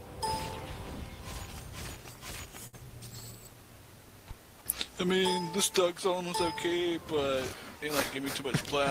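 At 2.67 to 2.85 s, a short stall from a late packet holds the sound. The jitter buffer ran empty, so the receiver stretched the last sound by 58 ms and then resumed with nothing missing. A spectrogram shows frozen, repeating harmonics across the gap.

From 8.19 s to the end, a jitter buffer speed-up runs the sound at 105% speed without changing pitch. Short pitch-period pieces, about 40 ms in total, are cut out, leaving repeated splices in the waveform and closer-spaced events on a spectrogram.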